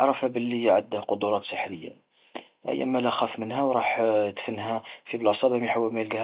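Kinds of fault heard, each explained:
No faults can be heard in this speech recording.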